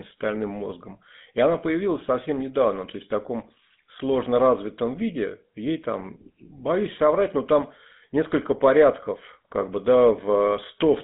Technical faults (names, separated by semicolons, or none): GSM full-rate codec